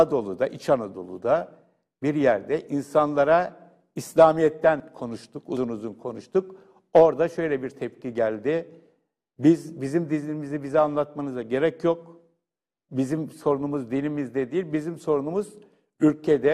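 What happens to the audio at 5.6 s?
At 5.57 s the program likely failed to collect its samples before the hardware overwrote them, a dropped buffer (overrun). Roughly 40 ms of audio is lost and the two sides are butted together, so there is an abrupt jump forward, not a gap.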